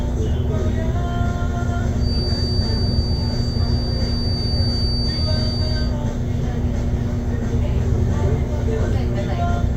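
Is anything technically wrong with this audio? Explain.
Yes. From 1.95 to 5.97 s there is a feedback whistle. A thin, steady 4.6 kHz tone sits roughly 10 dB below the sound, swelling and fading slowly in level. The likely cause is a speaker-to-microphone loop held just at the edge of feedback.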